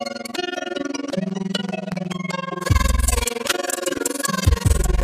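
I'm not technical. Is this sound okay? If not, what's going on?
No. Throughout the clip there is an overlap-add ripple. The system chopped the audio into overlapping pieces and glued them back together, but the overlaps didn't line up to a steady level. The volume therefore dips and swells about twenty times a second, and the dips are very deep, almost to silence. You hear it as a fast, rough flutter, a tremolo running through the whole sound.

There is also a train of clicks from 1.1 to 2.1 seconds. Something outside the sound itself, likely interference from nearby equipment or a faulty connection or power supply, pushed a series of sharp pulses into the recording. There are about seven of them, roughly six per second, arriving at an uneven pace. Each one is louder than the sound around it, so you hear a burst of irregular ticking or popping on top of everything.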